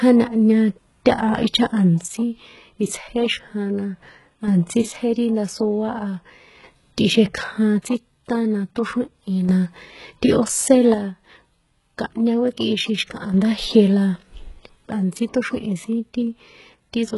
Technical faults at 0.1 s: HE-AAC compression

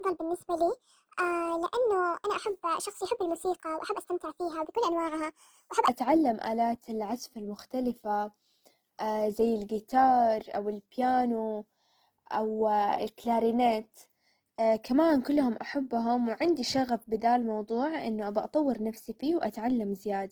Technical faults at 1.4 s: Opus compression; section at the wrong speed

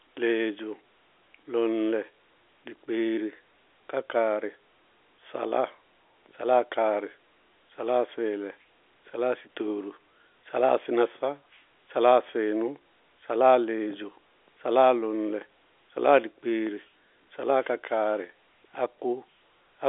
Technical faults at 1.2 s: none

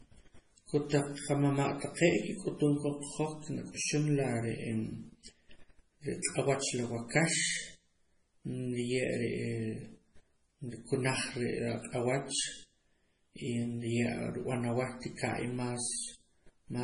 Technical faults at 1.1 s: MP3 compression

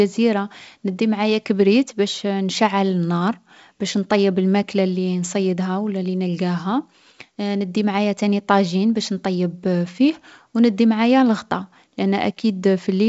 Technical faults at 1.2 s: none

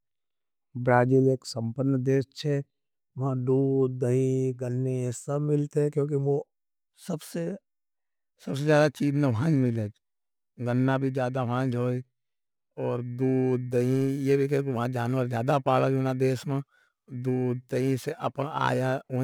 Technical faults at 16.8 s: periodic clock jitter

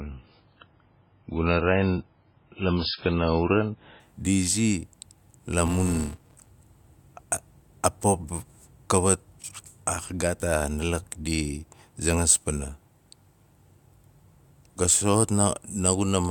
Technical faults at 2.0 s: adaptive stream starting at a low bitrate

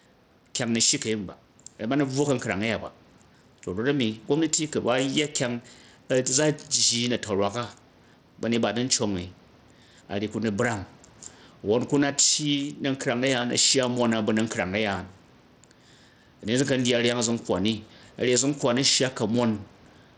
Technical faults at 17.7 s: gain pumping; Bluetooth SBC compression

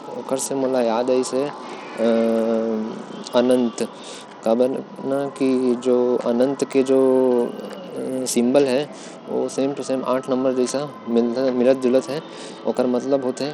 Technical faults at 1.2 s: Bluetooth SBC compression

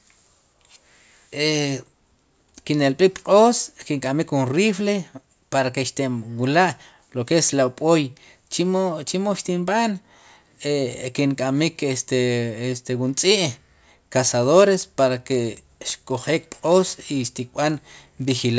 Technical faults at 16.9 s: resampler restarted on every block

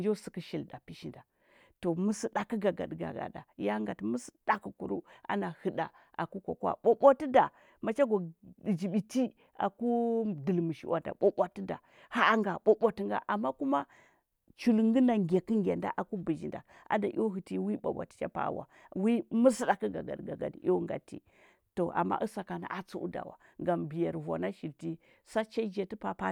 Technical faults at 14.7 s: none

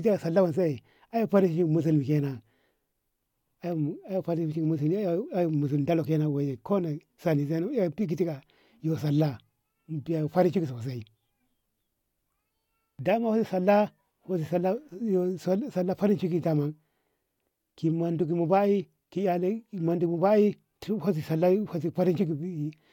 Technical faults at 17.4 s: none

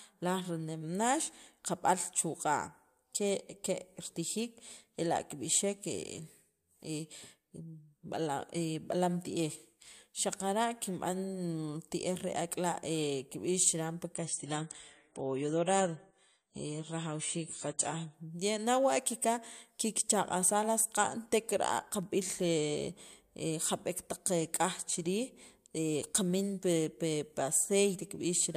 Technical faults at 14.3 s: adaptive stream at a lower bitrate

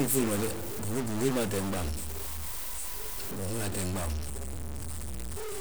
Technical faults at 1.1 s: stuck bit

